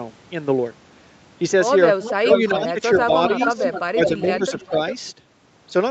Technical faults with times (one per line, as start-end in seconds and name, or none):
2.00-4.95 echo leak
2.22-3.12 speech suppressed in double talk
3.48-3.61 speech suppressed in double talk
3.92-4.75 speech suppressed in double talk